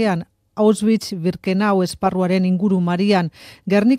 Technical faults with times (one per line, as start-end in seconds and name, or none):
none